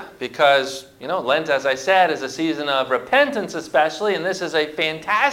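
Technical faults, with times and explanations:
Throughout: sample clock jitter. The sampling clock wavers by roughly a microsecond or two. This adds a hiss about 35 dB down that grows on loud, bright sound.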